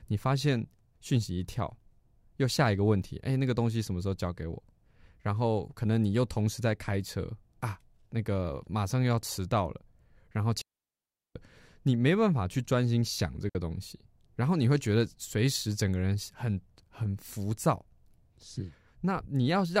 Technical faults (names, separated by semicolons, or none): digital wireless dropout